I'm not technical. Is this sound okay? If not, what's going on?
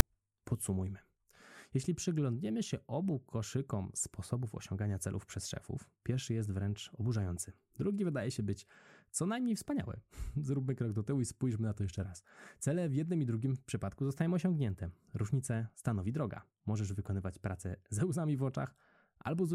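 No. Right at 0.00 s there is a case of file tags played as audio: a tiny, harsh click of static lasting only a few thousandths of a second before the speech begins. Audio files carry a small block of text information, such as a title or artist name. Here the player mistook that text for sound and played it. Text doesn't behave like a sound wave, so it comes out as a sharp rasp with abrupt edges.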